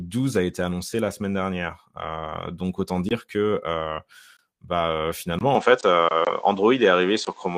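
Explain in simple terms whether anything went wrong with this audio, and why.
Right after "bah finalement", at about 5.55 s, the sound suddenly turns duller and more muffled and stays that way to the end. There is no gap at the change. The loudness shifts and a faint new background noise appears. This is most likely an input switched to a poorer device, where the recording jumped to a lesser microphone. That device captures nothing above about 8.2 kHz, so the crisp high detail disappears.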